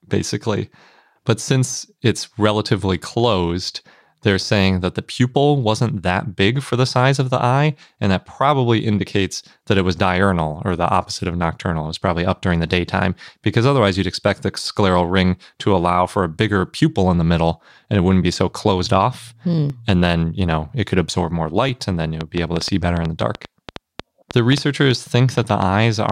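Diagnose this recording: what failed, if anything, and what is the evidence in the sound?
Evenly spaced ticks run from 17.69 to 21.69 s, just after "pupil in the middle": about five, one every 1.0 s, each where roughly a millisecond of audio is skipped. These are periodic USB or driver dropouts at the driver or buffer stage. A background task stalls the audio path on a fixed cycle, so a sliver of samples never arrives.

From 22.21 to 26.10 s, starting after "and then you", a train of clicks pops over the sound: about twenty, roughly five per second at an uneven pace, peaking about 10 dB above the signal. The stage is the analogue wiring, and the likely cause is electrical interference from nearby equipment injecting pulses.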